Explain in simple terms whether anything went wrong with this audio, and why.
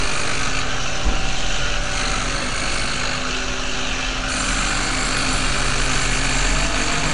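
Throughout the clip the sound has a rough, hissy haze and a smeared, watery blur, with nothing at all above about 10.6 kHz. That points to likely Nellymoser compression, which fills its quieter parts with noise, unlike plain low-quality MP3, which sounds swirly rather than hissy.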